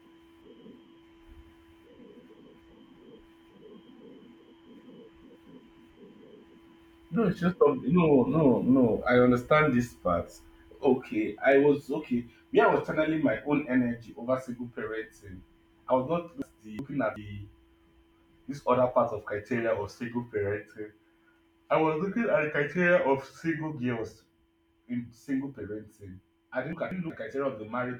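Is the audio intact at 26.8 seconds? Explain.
No. At 26.8 seconds the speech is inside a frames-out-of-order fault that runs from about 26.73 to 27.10 s, just after "in single parenting I". Two adjacent blocks of about 186 ms each, two frames apiece, were decoded in swapped order. The second half of that stretch plays before the first. The result is a brief garbled flutter. Nothing is dropped, so the timing after the stretch stays intact.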